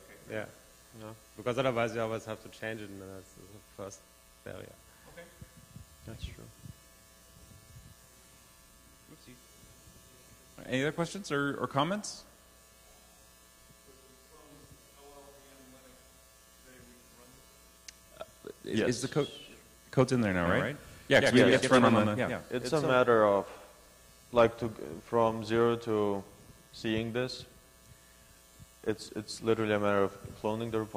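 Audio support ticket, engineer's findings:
Doubled audio track, 20.46 to 22.96 s. Full-band copy trailing roughly 100 ms behind, some 5 dB down, no decay or room colour; starts and stops abruptly. Likely a second capture path or misaligned edit layering an out-of-step duplicate.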